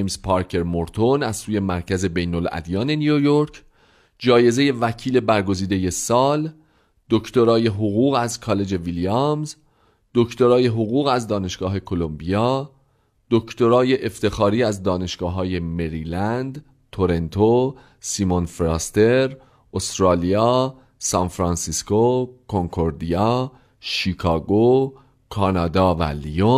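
No technical faults can be heard anywhere in this recording.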